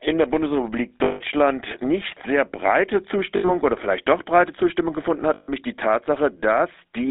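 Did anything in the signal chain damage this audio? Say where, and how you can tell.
Yes. The codec stage shows damage throughout. The speech carries the buzzy, gravelly roughness of the GSM full-rate codec, plainly audible, and the band is cut to a phone line, roughly 300 Hz to 3.7 kHz. This coder models the vocal tract and excites it with a sparse, regular pulse train at 13 kbps. That coarse excitation is what makes the grain. Nothing above the line band survives.

The network stage caused three dropouts from lost GSM frames, at 1.04 to 1.21 s, 3.36 to 3.51 s and 5.34 to 5.52 s. They last 160 ms, 80 ms and 140 ms. In each gap the sound hangs as a rough, metallic ring. The decoder is repeating the last good frame's parameters and attenuating them while no valid data arrives.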